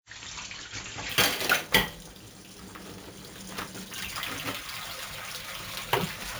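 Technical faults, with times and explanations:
1.09 to 6.39 s: imaging from sample-and-hold upsampling. A bright metallic fizz follows the sounds' level. A mirrored spectrum fills 8 to 16 kHz, about 11 dB below the signal. Samples were repeated without smoothing, which fits a 16 kHz original raised to 44.1 kHz.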